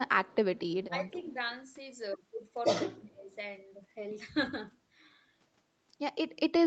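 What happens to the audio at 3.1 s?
The speech ducks sharply between 3.0 and 3.34 s, falling by roughly 20 dB. This is likely speech suppressed in double talk, with the echo canceller turning the talker down along with the loudspeaker echo.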